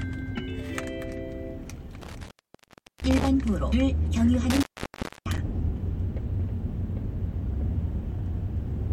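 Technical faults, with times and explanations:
2.02–3.28 s and 4.50–5.38 s, intermittent contact: twice a loose plug or cable connection opens, and the audio drops out for about 0.74 s and then about 0.62 s, with crackle as the contact breaks and remakes and faint hiss while the line is open. On a waveform each gap is a near-flat stretch bracketed by sharp spiky bursts. On a spectrogram it shows as a dark band with vertical broadband streaks at its edges.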